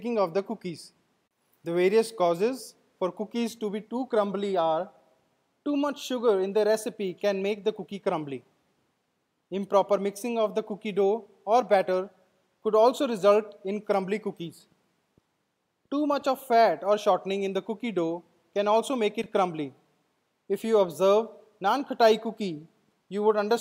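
Chunks out of order at 19.22 to 19.26 s: a 20 ms chunk arrived one chunk late and plays after the one that should follow it. Nothing is missing, but the swapped pair leaves three hard joins, heard as a brief jumbled stutter.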